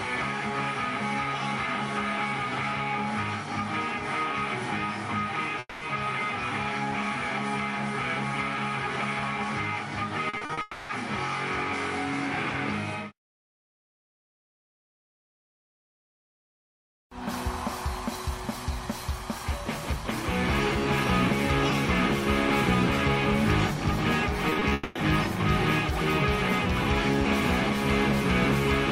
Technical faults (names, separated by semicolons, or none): long network dropout; repeated packet loss (robotic sound)